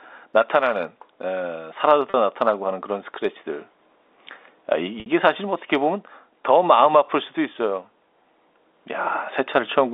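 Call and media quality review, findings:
Brief held, buzzy tone at 2.10–2.14 s and 5.00–5.06 s, 40 ms and 60 ms long. Packet loss with pitch repetition: the receiver loops the last pitch period to bridge the gap, which fits two and three 20 ms packets dropped. Narrow G.711 telephone band audible throughout.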